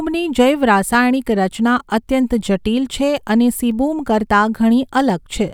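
Two devices in this speech recording's chain were likely running on separate clocks that disagree by around 100 parts per million, so the buffer between them periodically drops or repeats a handful of samples. These clock drift buffer slips sound like clicks about every 1.39 s, from 0.95 to 5.10 s.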